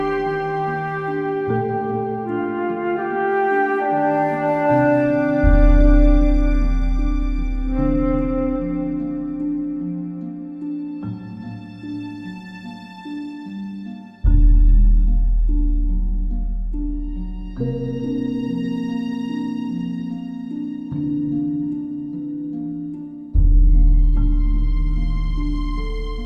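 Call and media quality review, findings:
No audible faults found; no findings to report.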